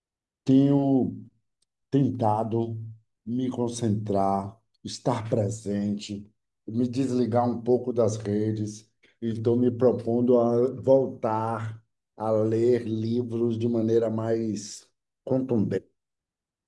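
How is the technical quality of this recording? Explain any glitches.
No technical glitches are audible.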